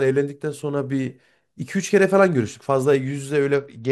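At 3.54 s a Bluetooth SBC bit pool drop dulls the treble and adds gritty noise until the end. This sudden step, rather than swirly artefacts, fits a pool cut from about 28 to 9.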